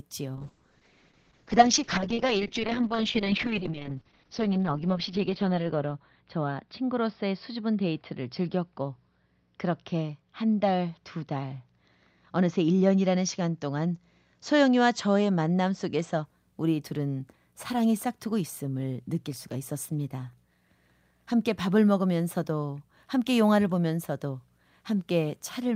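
Speech suffers a call bitrate drop from 0.37 s to 16.31 s: the encoder falls from 48 to 7 kbps, bandwidth narrowing from 20 kHz to 6 kHz, staying lowest for about 4.8 s, so it turns muffled or watery, not in brief gaps like packet loss.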